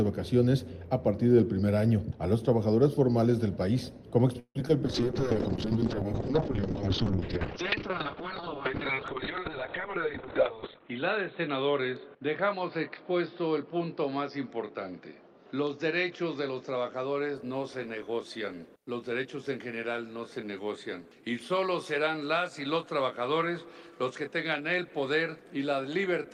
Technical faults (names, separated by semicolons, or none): call audio freeze; short concealed packet loss; call bitrate drop; jitter buffer speed-up